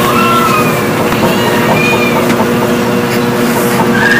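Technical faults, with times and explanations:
Throughout, hard clipping: the signal is driven about 15 dB beyond what one stage in the chain can pass, so every peak that would rise above that ceiling is sliced flat. Roughly 7 percent of the samples sit on the limit. Those squared-off tops create harmonics reaching well up the spectrum, so each loud moment comes out as a harsh, gritty fuzz rather than a clean peak, and the effect recurs across the whole clip.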